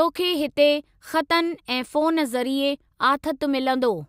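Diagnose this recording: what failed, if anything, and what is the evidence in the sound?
Nothing failed; the speech carries no audible fault.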